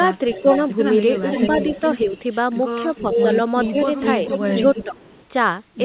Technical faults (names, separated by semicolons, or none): echo leak; speech suppressed in double talk